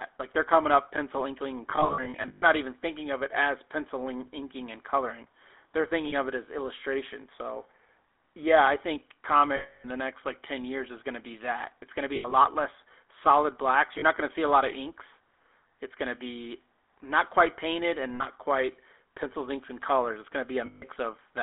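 The whole clip runs through the GSM full-rate codec. The line is band-limited to about 300 Hz to 3.5 kHz, and the speech has that plainly audible buzzy, gravelly grain from the pulse-excited vocal-tract model, which fits 13 kbps full-rate GSM.

On top of that there are lost GSM frames. Each time, the decoder repeats the last good frame, so you hear a rough metallic ring instead of a gap. The first is a scattered patch from 1.7 to 2.43 s, with the longest run about 150 ms. The others come at 6.08–6.15 s and 9.56–9.86 s, then 12.16–12.34 s after "going to be", 13.98–14.04 s after "less solid blacks", 18.14–18.25 s after "not quite painted and", and finally 20.66–20.84 s.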